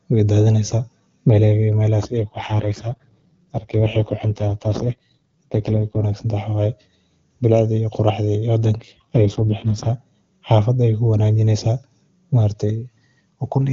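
An AMR rate drop at 2.18 to 6.04 s and 8.76 to 9.89 s roughens the speech into raspy, synthetic tones. Unlike a band switch, the bandwidth holds and nothing cuts out.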